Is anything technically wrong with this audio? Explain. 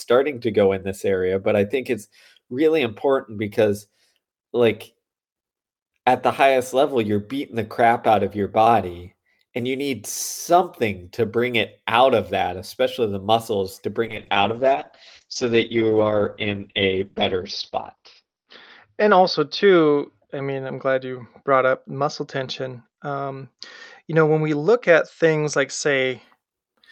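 Yes, there's a call bitrate drop from about 14.1 s to 26.3 s. The encoder got starved of bits, going from roughly 40 down to 8 kbps, with the worst stretch lasting around 4 s. Coding turns coarse and the top end gets chopped at 6 kHz, so it sounds muffled and rough.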